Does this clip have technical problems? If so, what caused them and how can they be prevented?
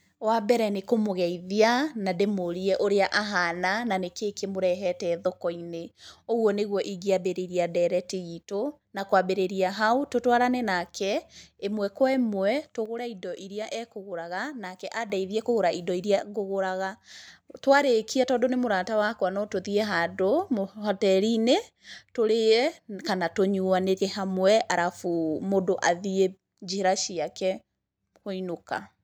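Yes. One channel drops out from 12.86 to 15.10 s and again from 16.19 to 17.28 s: the speech suddenly falls by about 6 dB, as if one side of the stereo pair likely went silent before the mono sum. Securing connectors and cables, and monitoring both channels while recording, prevents this.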